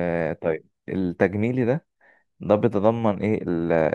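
A short speech recording, and nothing in it stands out as a technical fault. No problem can be heard at any point in the clip.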